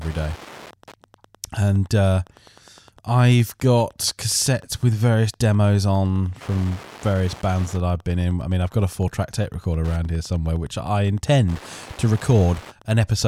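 Wi-Fi interference runs throughout: a nearby radio's 102.4 ms beacon is rectified by the audio circuit, adding steady ticking about ten times a second, well below the speech.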